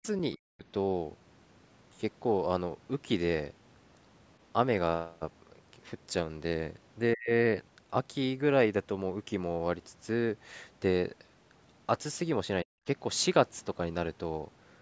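Speech recorded through a call, where the echo canceller likely faced double talk, failed to separate the near talker from loudspeaker echo, and turned everything down. The result is speech suppressed in double talk: the voice drops by about 40 dB at 0 to 0.04 s, 0.35 to 0.65 s, 7.14 to 7.31 s and 12.63 to 12.87 s.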